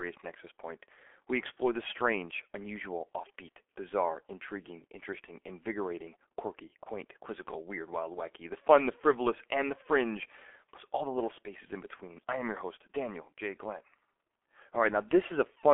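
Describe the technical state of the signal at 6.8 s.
VoIP packet loss concealed by the speech codec occurs from 6.83 to 6.88 s, between "intriguing interesting invigorating quirky" and "quizzical weird wild wacky". About 30 ms of audio went missing, which fits a single lost 30 ms frame. The decoder filled the gap by extending its last pitch and spectral envelope at falling gain, so the sound briefly smears into a buzzy, coloured fade. Because each frame builds on the previous one, the voice stays weak or distorted for a short stretch after normal packets resume.

Underneath this, the G.723.1 codec is active at 6.8 s as it is throughout the clip. Its damage is heavy, at roughly 6.3 kbit/s. The signal is held to a 300 Hz to 3.4 kHz telephone band, which makes it muffled. Because the coarse voice model updates only every 30 ms, the speech sounds hoarse and consonants blur.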